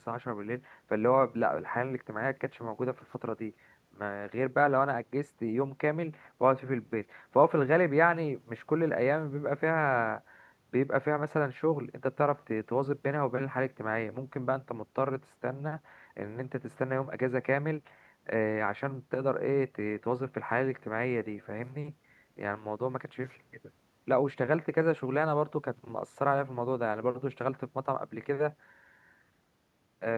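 Nothing goes wrong anywhere in this speech recording; there's no technical fault to point to at any moment.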